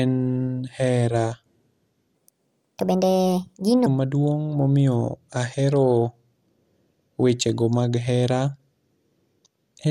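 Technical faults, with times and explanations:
throughout, MP2 compression: the speech is dull and gurgling, with coarse granular distortion, likely from MPEG Layer II coding at a low bitrate near 80 kbps.
2.15–3.86 s, section at the wrong speed: speech runs 1.48 times too fast, raised about seven semitones and hurried, likely from playback against the wrong clock rate.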